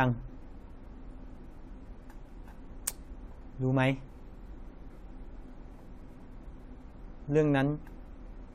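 No technical faults can be heard anywhere in the recording.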